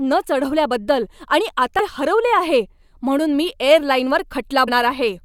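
Damaged data in a compressed stream shows up twice in this speech clip, as a brief digital blip at 1.79 s, right after "न चढवल्याबद्दल आणि", and again at 4.67 s. Each lasts under 20 ms. At those points the encoded bytes were corrupted, so the decoder misread the affected frame, lost its place in the bitstream and had to search ahead for the next valid frame header before clean decoding resumed.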